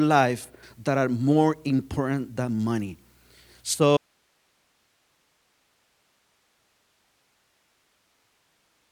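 An audio dropout to a faint residue begins at 3.97 s and lasts to the end of the clip. The speech cuts out abruptly rather than pausing or fading, and what remains is only hiss, far below the level of the speech. The likely cause is the wanted signal being lost upstream while the path after the break stayed live, so its own noise floor kept passing through for the rest of the audio.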